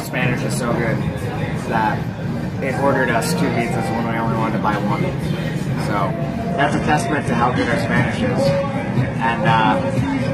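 At 6.52 s the sound abruptly drops in quality with no gap: the adaptive stream has switched to a lower bitrate and stays there to the end. Treble thins and turns synthetic, with nothing above 11.8 kHz. The sound points to a fall from about 96 to 16 kbit/s.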